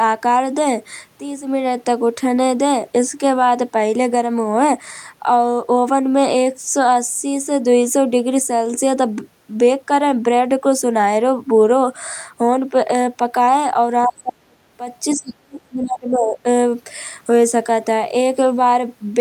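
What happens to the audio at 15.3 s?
Other side's voice leaking through, 15.15 to 15.34 s: a faint second voice, roughly 30 dB under the speech, likely loudspeaker echo the canceller failed to remove.

Speech suppressed in double talk, 15.15 to 16.47 s: the talker's voice drops by around 30 dB in places, likely because the canceller ducked both overlapping voices.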